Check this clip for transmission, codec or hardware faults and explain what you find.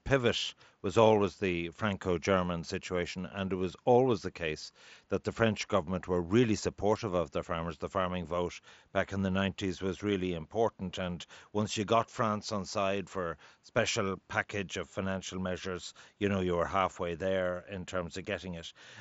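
No transmission, codec or hardware faults turn up in this clip.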